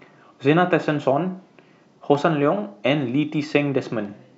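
No technical faults can be heard anywhere in the speech. There is nothing to place on a timeline or to explain.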